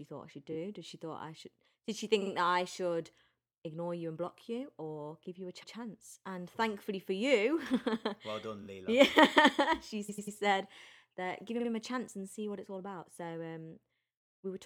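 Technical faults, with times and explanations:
0.51 s, 2.21 s, 5.62 s, 8.62 s, 10.08 s and 11.59 s, repeated frames: a 23 to 116 ms block plays again one to three times, heard as a stutter. This happens near "that I should ignore", "or give you a" and "him a chance and". It fits duplicated 23.2 ms compressed frames. On a spectrogram, identical slices tile side by side. The longest, 10.08–10.36 s, adds 0.28 s.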